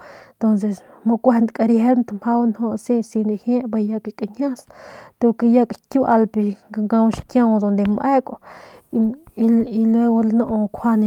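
No technical faults can be heard anywhere in this speech recording, so there is nothing to describe in time order.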